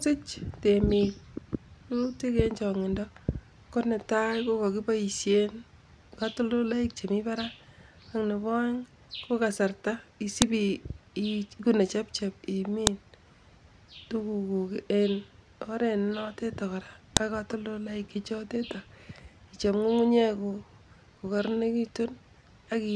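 File header played as audio, at 10.42 s (just after "ko kasarta"), 12.87 s and 17.17 s (just before "ak katoltoloik"). The speech was joined from separate WAV pieces with their headers left in. Those header bytes play as samples and give a sharp, loud click at each join.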